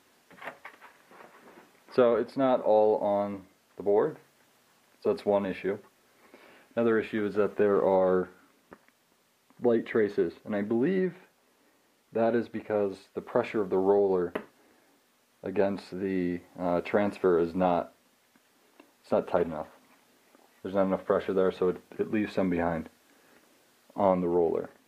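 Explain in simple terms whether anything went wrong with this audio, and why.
Nothing went wrong here: the signal stays steady and intact the whole way, with no technical faults to be heard.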